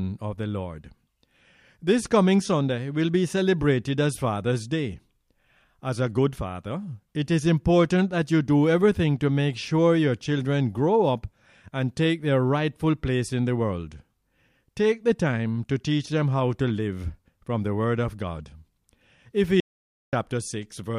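At 19.60 s the input signal was lost, likely through a dropped connection or mute, while the recorder kept writing silence. The result is an audio dropout to silence: the sound cuts off abruptly, leaving about 0.53 s of dead, roomless silence until it resumes at 20.13 s.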